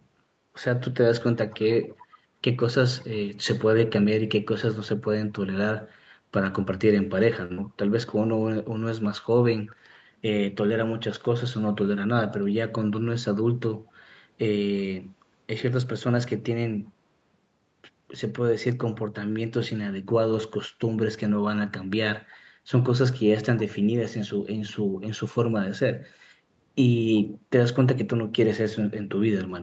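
Between 1.36 and 2.17 s a faint delayed copy of the speech trails the original by about 0.37 s, sitting roughly 25 dB below it. This is an echo leak, likely from a far end playing the call through a loudspeaker whose echo canceller failed to strip out what its microphone caught, so that residue travelled back. The same 0.37 s lag returns, even quieter at around 30 dB down, in a short scrap at 9.67 to 9.75 s and again at 27.15 to 27.38 s.

At 7.45 to 7.52 s there is a short stall from a late packet. A packet missed its playout slot, the jitter buffer emptied, and the receiver held the last sound for about 46 ms until the data arrived, then resumed from the same point. Nothing is lost, but that moment is drawn out with a slight buzz or dip. The same happens at 19.32 to 19.38 s, with a hold of about 37 ms.

Right after the first stall, at 7.54 to 7.59 s, comes a short concealed packet loss. 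About 40 ms of audio never reached the decoder. The receiver bridged the gap with roughly 35 ms of extrapolated sound, continuing the preceding pitch or shaped noise before blending back into real audio. The result is a brief smear where the true detail is missing.

At 12.05 to 12.41 s the jitter buffer speed-up engages. After the buffer had built up more audio than its target, the receiver trimmed repeated pitch-period-length pieces, removing around 40 ms in total. The speech runs about 8% fast at unchanged pitch and sounds slightly hurried. It recurs at 23.41 to 23.65 s at about 12%, again shedding roughly 40 ms, so that stretch sounds hurried. Throughout, the Opus call path limits the audio to content below 8 kHz.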